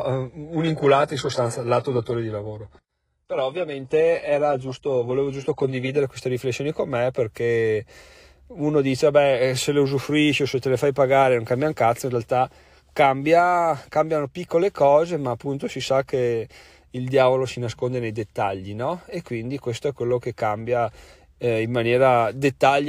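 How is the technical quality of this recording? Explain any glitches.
The recording opens at reduced quality for its first six seconds. From 0.0 to 6.0 s, an adaptive stream starting at a low bitrate plays a lean encoding until the player has measured the connection. The sound points to a low-rate HE-AAC version. Nothing is present above 11.5 kHz, the treble is thin or synthetic, and artefacts are strong. Quality jumps up cleanly, with no gap, just before "queste riflessioni con me", consistent with a switch to a higher-rate AAC stream.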